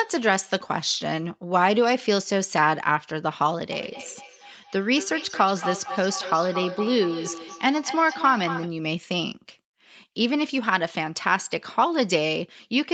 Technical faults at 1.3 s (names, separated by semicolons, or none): none